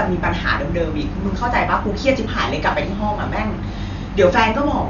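From start to end, the speech carries heavy damage typical of Dolby Digital compression, the likely cause. Nothing reaches above 7 kHz, so the sound is dull. The coder splits the signal into bands of frequency lines. Starved of bits, it leaves many lines empty and fills them with noise on playback. The damage is severe, which fits a bitrate around 48 kbps. Voiced sounds carry a rough, fluttering haze.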